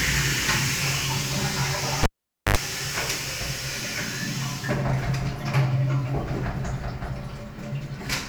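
At 2.03 s the signal is interrupted by a cable pulled and plugged in while live. A sharp pop marks the connector leaving the jack, and the sound drops to near silence for about 0.49 s. As the plug goes back in, the tip makes contact before the ground, so a burst of 50 Hz mains buzz lasting about 81 ms leaks in. A second pop follows as the circuit completes, and normal sound resumes by 2.57 s.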